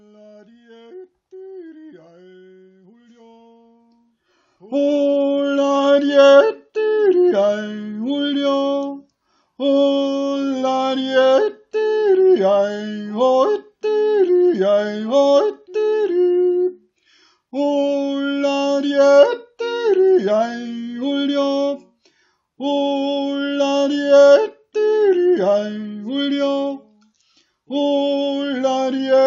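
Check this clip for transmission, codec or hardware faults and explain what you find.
Checking this clip turns up no faults to explain.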